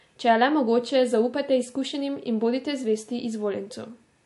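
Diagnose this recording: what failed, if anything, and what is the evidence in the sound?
The speech runs with nothing above 11.3 kHz from start to finish, and the remaining band carries plainly audible watery, swirling artefacts, with s sounds chirping metallically and consonant attacks smeared. The likely cause is MP3 compression at the codec stage, at a bitrate that points to roughly 50 kbps. Starved of bits, the encoder cut the treble at a fixed frequency and dropped weak frequency lines that flicker frame to frame. A plain low-pass filter or narrowband call path would roll off cleanly without that swirl.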